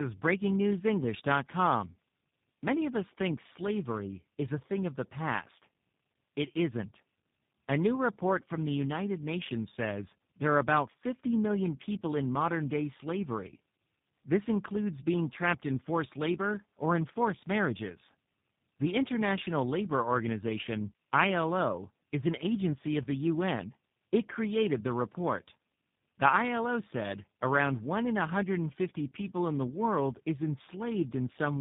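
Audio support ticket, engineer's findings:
Tandem speech coding through the whole clip: rough, muffled, warbly speech with nothing above 3.7 kHz. Sounds like three speech coders in a row, which fits GSM full rate into G.726 into G.729A, each one recoding the last one's damaged output.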